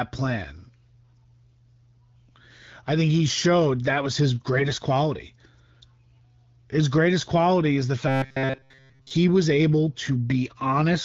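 At 4.56 s, right after "showed that was his", the speech briefly turns hoarse and gargly until 4.78 s. These are AMR bit errors. Over roughly 0.22 s, which fits about eleven 20 ms frames, a few percent of the weakly protected bits were flipped. The excitation pulses landed in the wrong places, and the fine gain and spectral values were off, but the pitch and level held roughly steady. On a spectrogram, the harmonic striations smear into scattered noisy speckle, and the waveform envelope stays about the same.

From 8.08 to 9.11 s, between "greatest quality is the" and "was able", the speech becomes a rigid, metallic buzz. It still loosely tracks the syllables, but pitched at a fixed 133 Hz. This is robotic sound from repeated short buffers, likely because audio arrived too slowly and a segment of about 7.5 ms was looped while most of the real signal was skipped. The spectrogram shows evenly spaced horizontal lines at multiples of 133 Hz instead of moving harmonics. 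The waveform shows a short pattern tiling over and over. Elsewhere the AMR wideband (HD Voice) codec at 12.65 kbit/s leaves only light coding texture.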